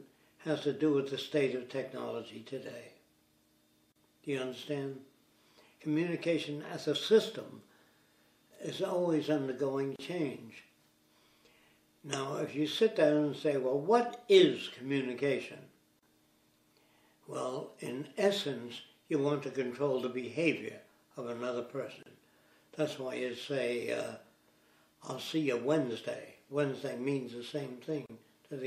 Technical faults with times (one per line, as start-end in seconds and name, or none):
0.00-28.67 MP3 compression
3.92-3.96 gap at a join of encoded pieces
9.96-9.99 gap at a join of encoded pieces
15.99-16.03 gap at a join of encoded pieces
22.03-22.06 gap at a join of encoded pieces
28.06-28.10 gap at a join of encoded pieces